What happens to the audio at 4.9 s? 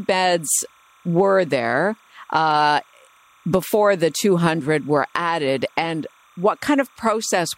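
At 4.9 s, as throughout the speech, timecode bleed from 30-frame code adds a faint chirping warble, showing on a spectrogram as thin steady bands near 1 and 2 kHz.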